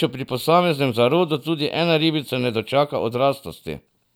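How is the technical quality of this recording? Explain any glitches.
No glitches turn up anywhere in this speech recording. Nothing in the audio points to a technical fault.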